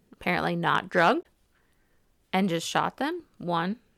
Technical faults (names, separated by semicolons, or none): damaged data in a compressed stream